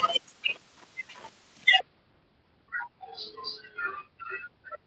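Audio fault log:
1.80–4.86 s, section at the wrong speed: from 1.80 s to the end, playback likely ran against the wrong clock at 0.68 times the original rate, so the speech slows and drops about seven semitones together, turning deep and dragged in the seconds after the talker shifts.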